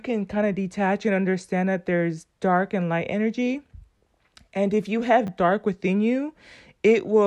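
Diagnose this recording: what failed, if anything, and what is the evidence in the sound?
A repeated buffer fault in the driver or buffer stage. At 3.98 to 4.01 s, between "dark and light energy" and "and if you", a tiny slice of sound plays several times in a row. It happens again, more briefly, at 5.27 to 5.29 s, before "dark within". Each repeat has a hard join, so it comes across as a short buzzy stutter. The repeat period fits a 10 ms buffer that was replayed when fresh audio arrived late. Unlike a dropout, no audio seems to be lost, and the copies are identical rather than smoothed over the way concealment would be.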